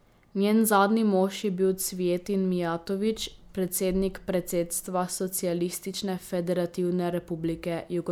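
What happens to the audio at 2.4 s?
Nothing goes wrong at 2.4 s: the speech runs through that moment intact, with no dropout, click, distortion or other fault.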